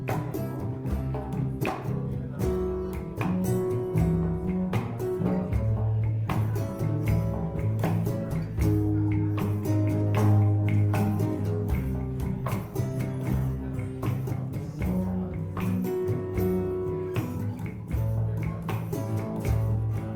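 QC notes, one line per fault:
1.9–13.9 s: adaptive stream at a lower bitrate. At 1.9 s the quality drops abruptly with no gap. Smeared, watery codec artefacts rise. This fits the stream stepping down from a rendition near 64 kbit/s to one near 24 kbit/s after the connection slowed. At 13.9 s the stream switches back up and the clarity returns just as suddenly.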